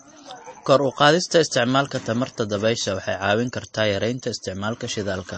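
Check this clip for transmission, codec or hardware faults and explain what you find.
There's one fault, and it runs the whole length of the speech: MP3 compression, likely from a low-rate encode that fits around 32 kbps. Nothing comes through above 8.3 kHz, and weak frequency detail flickers in and out between frames, so the sound turns watery and smeared.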